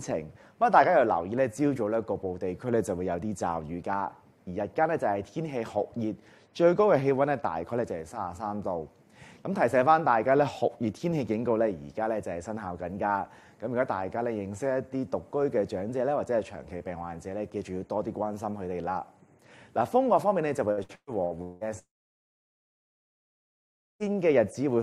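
From 20.71 to 21.64 s there is repeated packet loss with a robotic sound: five gaps, the longest 179 ms, each patched by extending the previous sound. About half of that span is concealed, so the audio turns choppy with pieces missing.

At 21.79 s the audio breaks off and stays away until 24.15 s. A brief continuation of the last sound fades, then roughly two seconds of silence follow. This is likely a long network dropout, and about 2.2 s of content is lost.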